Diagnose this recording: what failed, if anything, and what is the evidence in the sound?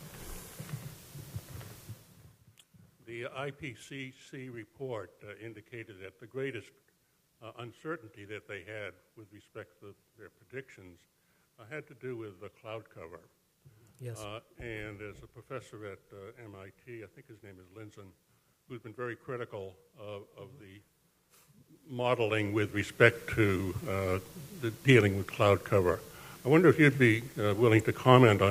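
Zipper noise from an unsmoothed gain stage at the buffer level: between 21.59 and 23.16 s a level change of around 20 dB ticks in about 30 stepped jumps a second.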